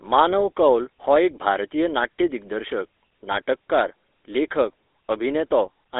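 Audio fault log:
throughout: GSM full-rate codec. The speech sits inside a 300 Hz to 3.7 kHz line band and carries a steady buzzy, gravelly roughness, which fits the 13 kbps full-rate coder. That coder rebuilds the voice from a vocal-tract model driven by sparse regular pulses, so the fine detail between pulses is lost and the roughness stays constant. Unlike bit errors, this coloration is even across the whole clip rather than bursting out at moments.
0.78 s and 3.32 to 3.38 s: GSM bit errors. At 0.78 s a brief pop lands just before "हो एक", consistent with a light error rate touching a single frame. After "नाट्य दिग्दर्शक", 3.32 to 3.38 s brings a longer squawking, gargled burst, which points to a heavier error rate spread over about three 20 ms frames. Corrupted filter, pitch or gain values make the decoder produce a wrong spectrum or level. Packet loss would leave silence or a smoothed gap instead.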